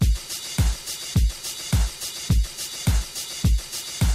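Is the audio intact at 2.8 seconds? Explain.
Yes, the audio is intact at 2.8 seconds, with no dropout, click, distortion or other fault at that moment.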